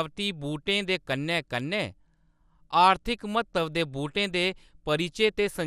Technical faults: MP2 compression

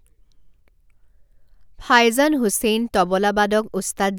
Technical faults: none

